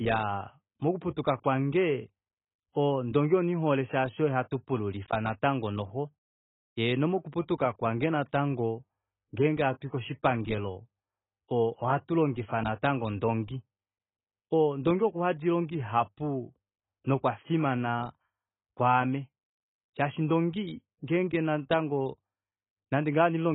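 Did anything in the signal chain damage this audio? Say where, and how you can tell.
Yes, at the codec stage, throughout the clip. The speech sounds dull and smeared, with nothing above 3.8 kHz. The likely cause is heavy AAC compression, which fits AAC-LC near 16 kbps. Short of bits, the encoder dropped the top band and coarsely quantised the rest.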